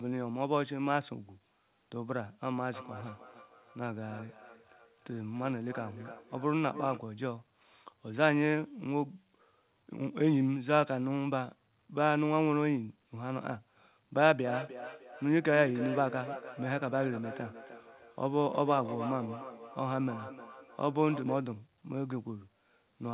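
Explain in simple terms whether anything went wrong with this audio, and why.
Twice the speech comes back at itself: from 2.73 to 7.13 s, and more strongly from 14.46 to 21.52 s, each word returns about a third of a second later, fainter, thinner and ringing. This is feedback echo between two devices. Two devices in the same room are on one call, and one plays what the other's microphone sent. That microphone hears it again and sends it round once more, and neither device's echo canceller removes sound played by the other.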